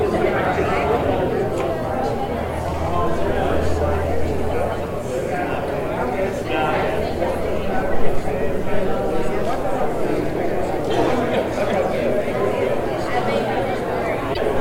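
From 14.33 to 14.39 s the sound jumps ahead and garbles, likely a broken MP3 bit reservoir; unlike a plain dropout, it spans two 26 ms frames.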